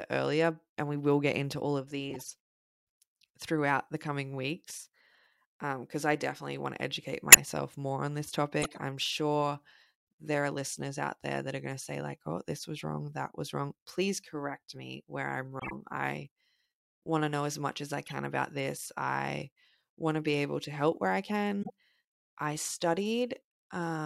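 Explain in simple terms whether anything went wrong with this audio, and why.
Something did go wrong: six short bursts of corrupt frame decoded. Data in a compressed frame got damaged, and the player decoded it anyway, so sound landed at wrong frequencies for a fraction of a second, heard as squeaks or noisy blips. They fall at 2.10–2.27 s after "get into all of", 7.29–7.37 s (by far the loudest), 8.62–8.80 s between "more on this" and "I'm sure", 15.59–15.73 s, 18.06–18.12 s between "as much as I" and "about this I want", and 21.63–21.70 s.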